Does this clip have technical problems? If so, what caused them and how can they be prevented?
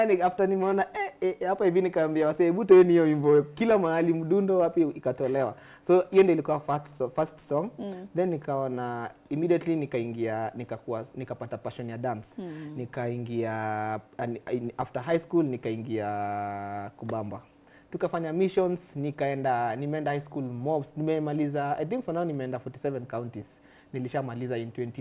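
No, this clip has no technical problems, so there is nothing to trace or prevent.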